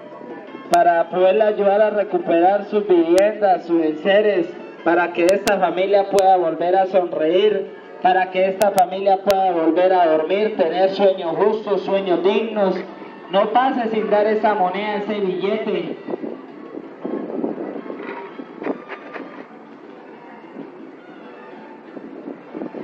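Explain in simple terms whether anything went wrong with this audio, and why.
Integer overflow breaks this audio with sharp cracks. When the loudest peaks exceeded the largest number the system could store, they wrapped to the opposite extreme instead of being capped. Cracks hit at 0.74, 3.18, 6.19 and 9.31 seconds, with longer bursts from 5.29 to 5.48 and 8.62 to 8.79 seconds.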